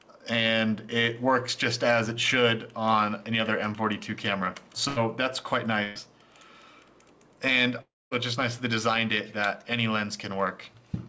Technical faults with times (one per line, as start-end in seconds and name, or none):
4.88-4.99 burst of packet loss
5.83-5.98 burst of packet loss
7.81-8.14 long network dropout